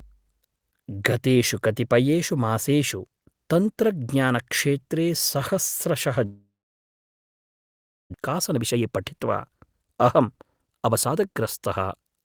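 A long network dropout runs from 6.25 to 8.16 s. The sound smears into a fading buzz and then about 1.6 s of silence before returning, about a second of speech missing. This is likely caused by packets halting and the receiver concealing the gap until it gave up.

A jitter buffer speed-up follows from 8.18 to 12.19 s. Speech plays about 120% fast at unchanged pitch, sounding hurried, as the receiver trims short pitch-period slices to drain the backlog, removing roughly 0.7 s of built-up delay.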